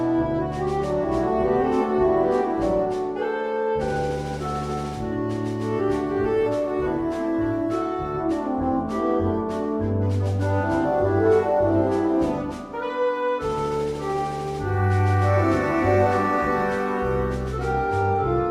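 No technical faults occur at any point in the audio, so there is nothing to describe in time order.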